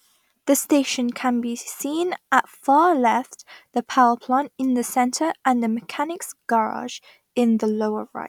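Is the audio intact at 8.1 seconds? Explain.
Yes, at 8.1 seconds the audio is intact, with no fault audible at that moment.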